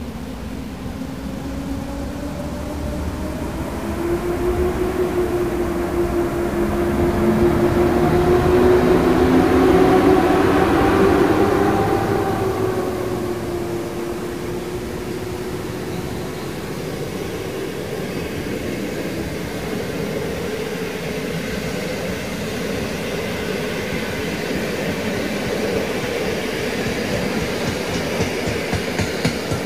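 From start to finish the sound carries a harsh, buzzy distortion. It rides on every louder passage and follows the shape of the waveform. The quiet gaps are not silent. They fill with a steady noise at about -35 dBFS, and it flips character as the signal crosses zero. This points to a stuck bit, likely one converter or data line held at a fixed value, so about half the samples are shifted by that bit's weight.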